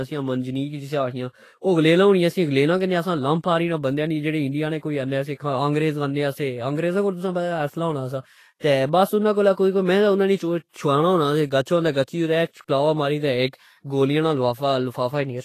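Throughout the speech, nothing is present above 14.2 kHz, and the upper band has a grainy, hissy texture with roughened tones. This is Vorbis compression, likely at a low bitrate around 32 kbps. Unlike broadband background noise, the hiss tracks the speech and disappears in pauses.

Pre-echo appears four times: at 4.79 to 4.83 s just after "نے آنے", at 5.35 to 5.40 s just before "انگریزآنے سے", at 8.59 to 8.63 s after "پتا اصحلہ ہونا سا", and at 9.53 to 9.57 s. Each time, a short hiss of roughly 34 to 47 ms precedes a sharp onset. The codec spreads the noise budget for the loud attack across the quiet moment before it. Reverb would trail after the sound, but this hiss comes before it.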